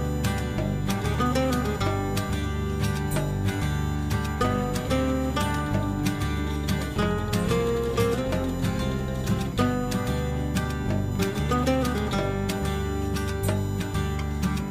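A USB whine runs through the whole clip: a fixed-pitch tone on a 1 kHz fundamental, matching the bus's 1 ms frame rate, strongest at its seventh multiple, 7 kHz. Frame-by-frame current draw leaking via power or ground leaves a whistle about 25 dB below the sound.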